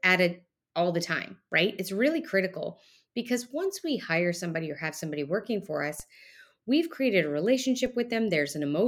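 At 6.00 s, after "have somebody working for", and 7.86 s, after "we've created a", a DC step of about -32 dBFS shifts the baseline, heard as a low thump decaying through a 20 Hz high-pass.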